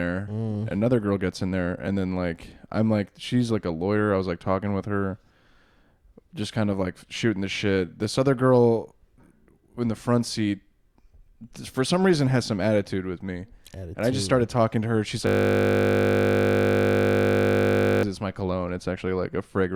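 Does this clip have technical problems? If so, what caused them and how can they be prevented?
Yes. A system hang loop runs from 15.27 to 18.03 s, just before "it's my cologne". The computer or audio driver stalled, while the sound hardware kept replaying the same ring buffer. A 20 ms slice of speech repeats exactly, about 50 times a second. That short loop is heard as a steady 50 Hz buzz for nearly three seconds. It points to a buffer of about 20 ms. To prevent it, fix the driver or system stall and have the audio path output silence when its buffer isn't refilled.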